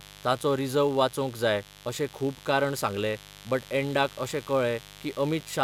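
Mains buzz runs through the whole clip, from the first moment to the last, sitting roughly 20 dB below the speech. Sharp switching spikes, of the kind a dimmer, rectifier or poorly shielded cable lets in, enter the signal twice per cycle of the 50 Hz supply, so a dense stack of 50 Hz harmonics climbs well into the kilohertz range. The result is a constant, raspy buzz underneath everything.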